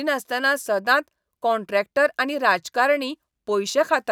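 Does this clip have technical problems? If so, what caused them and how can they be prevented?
No, nothing in this speech recording stood out as a technical problem on listening, so there is nothing here that needs preventing.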